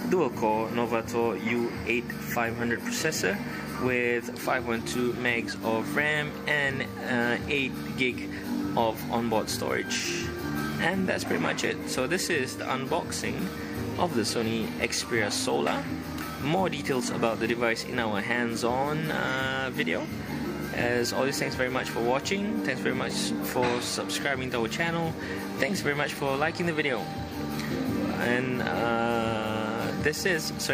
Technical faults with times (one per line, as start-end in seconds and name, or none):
none